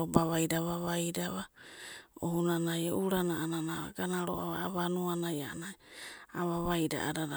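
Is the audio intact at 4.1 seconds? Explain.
Yes, the speech at 4.1 seconds plays through intact, with no dropout, click or other fault at that moment.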